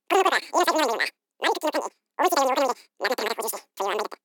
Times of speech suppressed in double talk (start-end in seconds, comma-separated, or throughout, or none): none